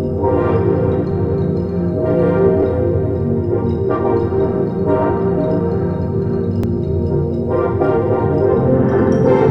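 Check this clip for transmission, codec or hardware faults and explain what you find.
One fault, overlapping chunks, at 2.63 s and 6.64 s: each 4-second chunk starts before the last ends, replaying about 7 ms and causing a brief click or stutter at each join.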